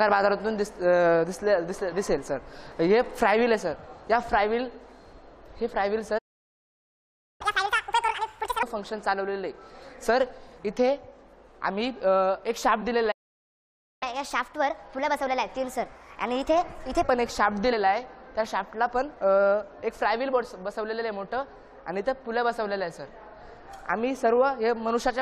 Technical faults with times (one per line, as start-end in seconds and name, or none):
1.92 compressed frames skipped
6.18-7.41 playback stall
7.41-8.63 catch-up at higher speed
12.81 compressed frames skipped
13.11-14.03 playback stall
14.03-17.03 catch-up at higher speed
17.71 compressed frames skipped